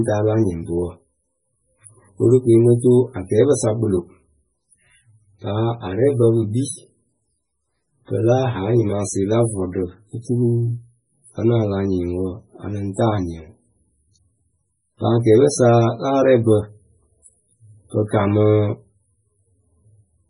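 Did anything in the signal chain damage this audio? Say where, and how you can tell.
Yes, and it sits at the codec stage: the speech carries heavy damage from what is likely MP3 compression, present from start to finish rather than at any one moment. Nothing survives above about 10.6 kHz, a hard treble ceiling, and the s sounds come out swirly and chirpy while the whole thing has that watery wash. That fits a very low bitrate, around 16 kbps, where the encoder starves, drops the top band and lets weak frequency lines flicker frame to frame.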